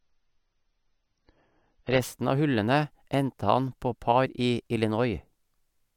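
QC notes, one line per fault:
0.0 to 2.0 s, adaptive stream starting at a low bitrate: the opening speech is dull and smeared, with nothing above about 7.5 kHz and heavier codec artefacts, which fits a low-rate AAC-LC stream at around 24 kbit/s. The player grabbed a cheap rendition to start fast, then switched up once it had sized up the connection. At 2.0 s, right before "av hullene", the treble snaps back with no gap, consistent with a step to roughly 96 kbit/s.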